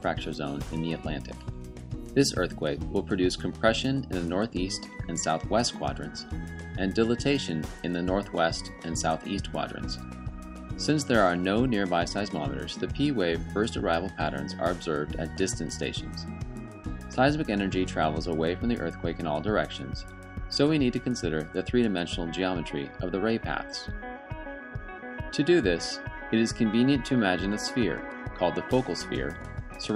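There are no technical faults to describe in this audio.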